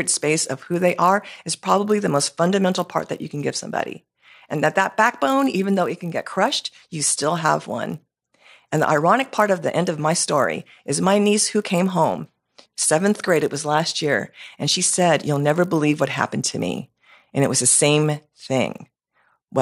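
A speech recording with a steady buzz riding under the voice from start to finish, and it's the classic resampler restarted on every block. The upsampling from 24 kHz to 48 kHz was done in 20 ms chunks with no memory carried across, so each chunk edge gets a small glitch. At 50 of those a second the ticks fuse into a 50 Hz buzz that only shows up while there's signal, dropping out in the gaps.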